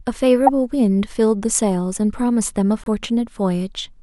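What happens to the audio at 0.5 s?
Right around there, from 0.46 to 0.49 s, there's a corrupt frame decoded: a couple of damaged frames get played anyway, throwing a sharp, chirpy burst into the speech.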